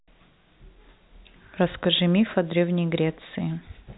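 Nothing stood out on listening to this speech, which carries the narrow band of ordinary telephone coding.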